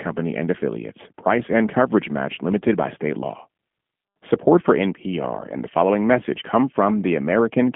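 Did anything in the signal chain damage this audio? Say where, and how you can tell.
Yes. G.729 codec damage runs throughout this speech, at the codec stage. Nothing passes above 3.7 kHz, the band sits at about 150 Hz to 3.4 kHz, and the plainly rough, synthetic texture fits an 8 kbit/s coder rebuilding speech from filter, pitch and pulse parameters.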